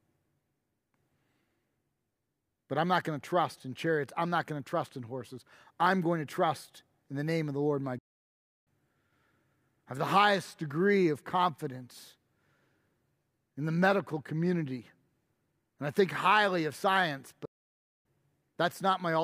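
At 7.98 s and again at 17.45 s the speech halts in a playback stall, going silent for about 0.68 s and then 0.6 s, likely because the player ran short of data. The gaps last far longer than a brief dropout.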